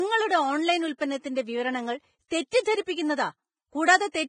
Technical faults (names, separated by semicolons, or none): Vorbis compression; pre-echo